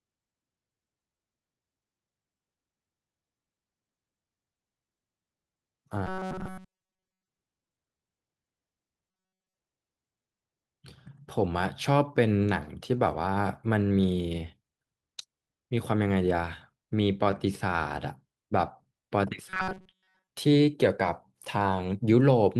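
Clock drift between sender and receiver runs through the whole clip. The sending side's clock appears to run roughly 1% slow relative to the receiver, so the receive buffer keeps draining and the playback side has to keep compensating. The result is a faint unevenness in timing rather than any single obvious break, with small irregular hiccups spread across the speech.

From 0.27 s to 17.77 s the compensation shows up as repeated timing corrections. The receiver stretches the audio by repeating short pieces, so the speech plays at about 99% speed and gains roughly a fifth of a second overall. The edits all push in the same direction but fall at uneven spacing. They sound like slight stumbles and a mildly unsteady pace rather than clear glitches.

Three stretches turn robotic: 6.07 to 7.28 s, 9.11 to 9.59 s, and 19.49 to 20.28 s. In each, the speech collapses into a rigid, metallic buzz at 188 Hz that still roughly tracks the syllables. 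The likely cause is the playback side looping a tiny buffer, about 5.3 ms long, while real audio is late, with most of the sound in those stretches being repeats. The buzz pitch is simply the loop rate.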